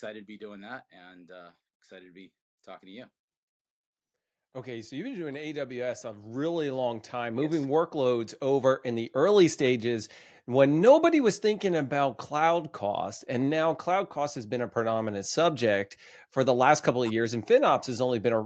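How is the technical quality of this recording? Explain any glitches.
Two stretches of automatic gain rising are the main glitch. From 0.05 to 3.11 s and again from 4.39 to 10.12 s, the gain control decides things are too quiet and slowly turns itself up, by about 5 dB and then about 14 dB, so voice and background swell together.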